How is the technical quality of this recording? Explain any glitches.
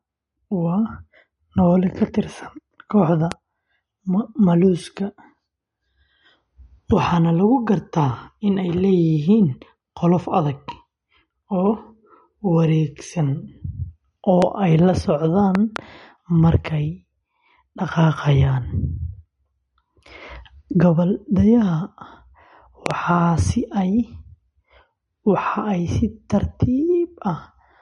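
The speech has two problems: compression damage throughout and six loud pops in four places.

MP3 compression: The speech was likely squeezed through an MP3 encoder at a low rate, consistent with about 46 kbps. Starved of bits, it dropped weak frequency lines frame by frame and cut everything above 11.2 kHz, leaving plainly audible codec damage and a dulled top end.

Loud pop: At 3.32 s and 14.42 s there is a single pop, and from 15.55 to 15.78 s and 22.86 to 22.93 s there are two each. A likely voltage step or pulse, perhaps from a connector, switch or static, landed on the signal. Each pop is about 15 dB above the speech, which continues underneath.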